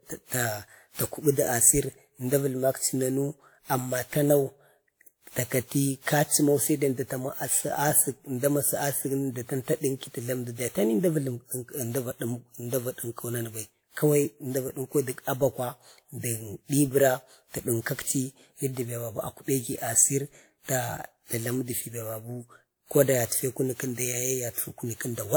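Throughout, the speech carries generation loss: swirly, hollow and smeared beyond what 128 kbit/s WMA implies, likely from around seven lossy re-encodes; content extends to 20.1 kHz.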